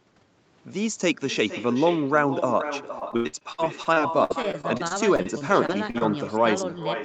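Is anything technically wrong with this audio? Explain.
Yes. There are two faults.

The first is echo with no canceller, and it runs through the whole clip. The far end played the call over a loudspeaker. Its microphone picked that sound up again, and nothing removed it. So the speech returns after the network round trip. Every phrase is shadowed about half a second later by a copy about 10 dB quieter. The copy sounds thinner than the original.

The second is repeated packet loss, which gives a robotic sound. It runs from 2.99 s to 6.03 s. Over that stretch there are around twenty short holes. The longest lasts 86 ms. Each hole is patched by stretching out the last bit of sound, and then the next hole soon follows. About a fifth of that stretch is patched this way. The speech turns choppy, with pieces missing. Because the call path stops at 8 kHz, the patched sound is also band-limited.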